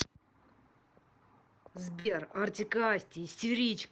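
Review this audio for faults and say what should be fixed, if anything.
A burst of packet loss runs from 1.99 s to 2.08 s in this speech. A short stretch of audio never arrived in time. The receiver filled about 54 ms by stretching the last sound and fading it down. Then the audio jumps ahead, and about 60 ms of speech is simply gone. The call codec cuts off the high frequencies near 8 kHz. To prevent this, enable forward error correction and a slightly deeper jitter buffer on the link.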